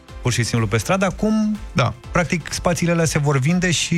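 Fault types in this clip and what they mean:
No technical faults can be heard in this audio. There is nothing to list for it.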